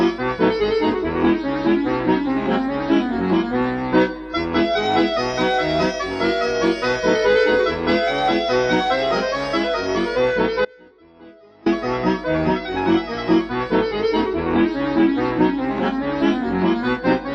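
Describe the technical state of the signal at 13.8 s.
At 13.8 s the signal is intact, with no dropout, distortion, glitch or other fault audible at that point.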